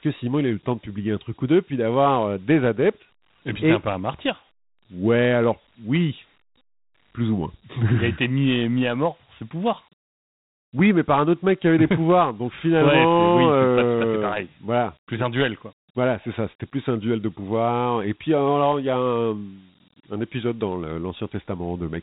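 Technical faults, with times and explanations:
Throughout, Dialogic VOX ADPCM. Nothing sounds above 3.9 kHz, so the speech is dull and phone-like. A gritty hiss rides on the speech. Each sample is stored as a coarse 4-bit step, which fits 32 kbps at 8,000 samples a second.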